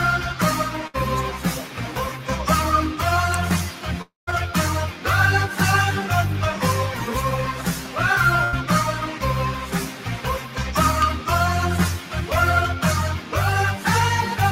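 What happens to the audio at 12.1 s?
A speech-tuned noise suppressor is running on this non-speech sound, treating steady tones and tails as noise, so the level swings by roughly 10 dB and the sound pumps and thins. From 11.99 to 12.14 s, the noise suppressor cuts the sound further, taking it for noise and pulling it down by about 6 dB, so it briefly sinks.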